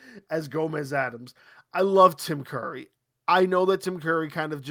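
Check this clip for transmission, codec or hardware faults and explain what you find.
No transmission, codec or hardware faults can be heard in the speech; the signal stays continuous and stable throughout.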